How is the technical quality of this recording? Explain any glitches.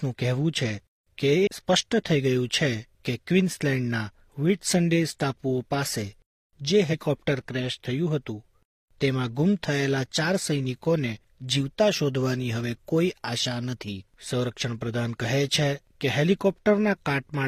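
The recording has two glitches, both compressed frames skipped. At 1.43 s the audio jumps ahead by about half a second, and at 6.89 s by roughly 150 ms. Each jump fits a run of whole 42.7 ms frames dropped in decoding. Each join is heard as an abrupt skip forward in the audio.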